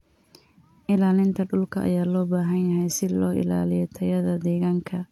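Speech with a single sharp click at 4.20 s, likely from dropped samples: a couple of samples are missing, so the waveform jumps abruptly.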